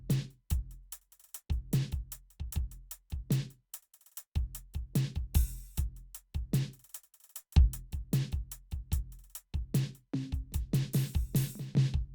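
Nothing goes wrong anywhere in this music, so there are no technical faults to point out.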